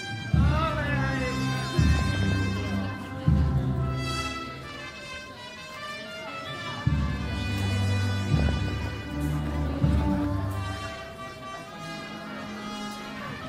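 From 1.97 to 2.35 s, DAB burbling: uncorrected bit errors corrupt MP2 sub-band samples, putting short blips of noise into single sub-bands. A spectrogram shows bands flickering frame by frame.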